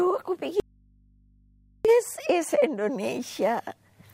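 Audio dropout to a faint residue from 0.60 to 1.85 s: the wanted signal was likely lost upstream while the rest of the path stayed live. The sound cuts off abruptly for 1.25 s, leaving only mains hum roughly 35 dB down, then snaps back.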